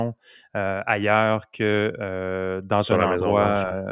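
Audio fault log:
No faults heard anywhere in the speech recording.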